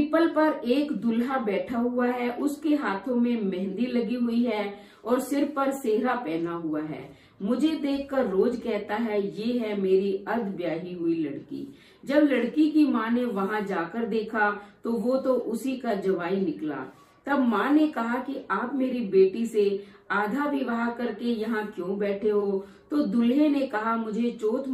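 Nothing technically wrong can be heard anywhere in the audio. There are no faults to place in time or trace to a cause.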